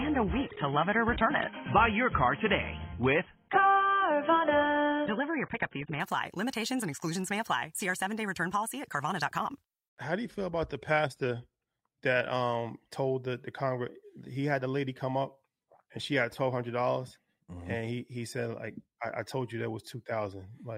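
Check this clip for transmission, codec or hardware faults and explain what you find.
One fault is present. Adaptive stream starting at a low bitrate, 0 to 6.0 s: the player began on a lean rendition for a fast start, then switched up after gauging the connection. Until 6.0 s nothing sounds above 3.8 kHz and artefacts are heavier, which fits a 16 kbit/s AAC stream. Then the quality jumps abruptly, with no gap, to a level consistent with 96 kbit/s.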